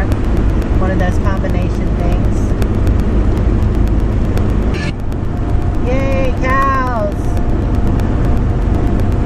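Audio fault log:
0.12 to 9.12 s, periodic USB or driver dropouts: a short gap of silence, roughly a millisecond long, recurs every 0.125 s, about eight times a second and some seventy times in all. A background task appears to stall the USB bus or the audio driver on a fixed schedule, so a sliver of the stream never arrives and is replaced by silence. The result is a steady, evenly spaced ticking, heard only while the sound itself is present.
6.96 s, dropped samples: a single sharp click stands apart from the regular ticking. Its likely cause is a handful of samples, around a tenth of a millisecond, missing from the stream, so the waveform jumps straight from one value to a later one. The loss is far too brief to remove any audible sound. What remains is the step in the waveform, which produces the click and a thin vertical line across the spectrum.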